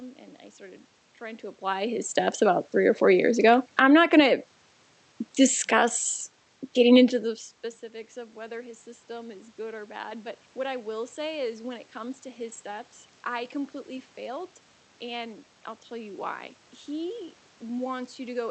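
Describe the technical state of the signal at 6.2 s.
Automatic gain falling, 5.4 to 7.48 s: the gain control judged the input too loud or its background too noisy and eased down about 3 dB, so speech and background sink together.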